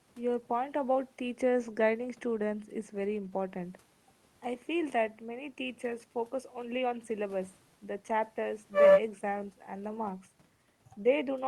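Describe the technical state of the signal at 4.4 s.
At 4.4 s the speech signal is intact, with no fault present, just the normal character of the Opus call path and the faint room noise sitting about 40 dB below the voice.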